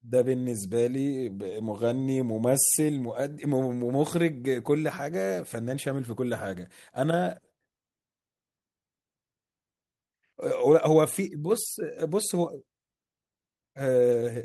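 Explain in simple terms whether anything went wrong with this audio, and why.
Nothing went wrong with this speech recording; it simply went through an ordinary internet call connection, which is working the way it should.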